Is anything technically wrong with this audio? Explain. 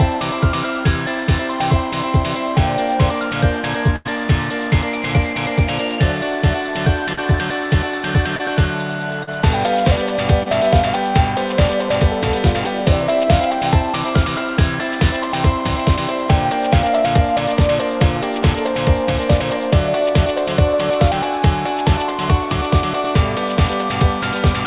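Yes. From 3.96 to 4.07 s the audio freezes into a held, fading continuation of the preceding sound before jumping ahead. This is a burst of packet loss: about 80 ms never arrived, and the receiver stretched the last sound over roughly 90 ms while turning it down.

Brief smears or wobbles occur at 7.13 s (about 40 ms), 8.37 s (about 22 ms), 9.23 s (about 40 ms) and 10.43 s (about 26 ms). Each is short concealed packet loss: 20 to 40 ms arrived too late, so the decoder extrapolated from the previous sound and blended back into the real audio. Throughout, the band stops at 4 kHz, which fits a narrowband telephone codec on the call path.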